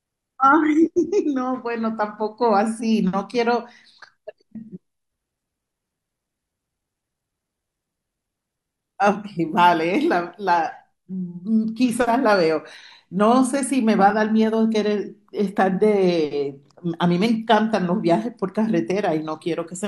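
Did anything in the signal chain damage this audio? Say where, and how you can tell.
No, nothing along the way seems to have damaged this one, and I can't hear any stage of the chain leaving a mark on it.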